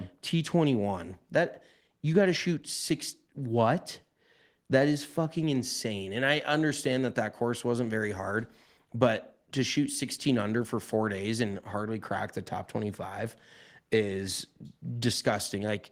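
No audible technical faults.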